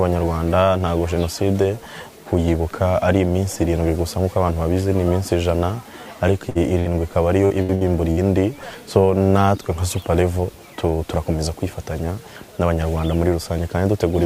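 At 6.49 s and again at 6.79 s there's a burst of packet loss, each about 60 ms. The receiver stretches the last bit of sound to cover the hole, so you hear a short held smear, then the audio jumps ahead with roughly 60 ms gone.

From 7.45 to 8.20 s it turns into repeated packet loss with a robotic sound. There are four gaps, the longest about 65 ms, and about a third of that stretch is patched over. The patches come so close together that the sound goes choppy, with pieces dropping out.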